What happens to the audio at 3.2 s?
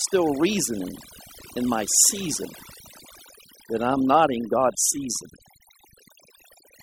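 At 3.2 s, as across the whole clip, the speech carries overdone noise removal. An aggressive noise reducer is pulling individual frequency bands down to near zero, taking quiet parts of the voice along, leaving speech over near-silent, twinkling background specks.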